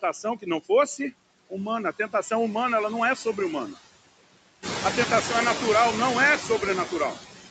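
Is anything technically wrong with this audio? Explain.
Yes. Throughout, there are noise suppressor artifacts: the suppressor pulls steady background down by about 21 dB frame by frame, leaving a residue that pumps between and under the speech. From 0.02 to 0.47 s, speech is cut by the noise suppressor. It mistakes roughly a tenth of a second of soft speech for noise and drops it by up to about 17 dB, so the opening sounds swallowed. The room noise, which rises by about 11 dB around 4.5 s, and the band limit at 8 kHz are normal parts of the recording room and the call path rather than faults.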